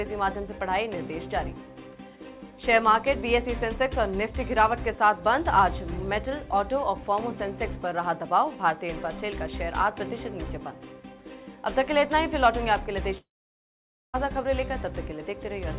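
At 13.18 s the audio stops and does not resume until 14.16 s. Nearly a second is missing. For a moment, the last sound is stretched into a fading buzz. Then about 0.9 s of silence or low steady noise follows. When the sound returns, the lost part is simply gone. This is likely a long network dropout. Packets stopped arriving, and the receiver's concealment could not cover the gap. Through the G.711 call path, nothing above 4 kHz is heard.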